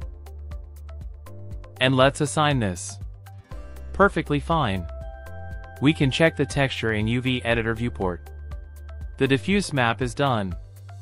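No technical faults are audible anywhere in this audio.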